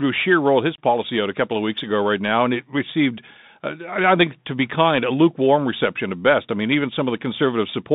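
Throughout, a Bluetooth CVSD headset codec confines the speech to 150 Hz–3.7 kHz. Unlike a plain telephone band-limit, it adds a granular hiss under the speech, and scratchy s sounds where the adaptive step size falls behind.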